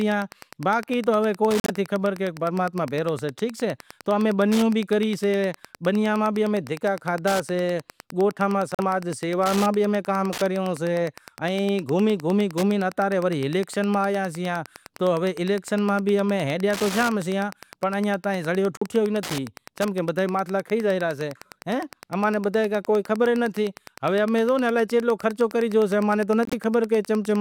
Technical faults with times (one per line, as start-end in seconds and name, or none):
0.00-27.40 Wi-Fi interference
1.60-1.70 corrupt frame muted
8.75-8.80 corrupt frame muted
18.77-18.82 corrupt frame muted
26.45-26.53 corrupt frame muted